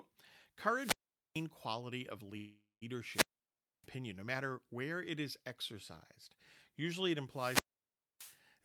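A speech recording with two kinds of fault. A wireless microphone squelch dropout occurs three times: 0.74 to 1.47 s, 3.10 to 3.88 s and 7.29 to 8.41 s. Each time the FM signal fades, hiss rises, and the receiver's squelch cuts the output to near silence for about 0.44, 0.61 and 0.62 s before the voice returns. Between 2.37 and 2.84 s there is a different interruption, likely a call audio freeze where the jitter buffer ran dry. The last sound is stretched into a fading buzz or hiss that ends in about 140 ms of silence, filling roughly 0.44 s. Speech then resumes exactly where it stopped, with nothing lost, only pushed later. That is what separates it from the dropouts, which open with rising static and leave a hard muted hole.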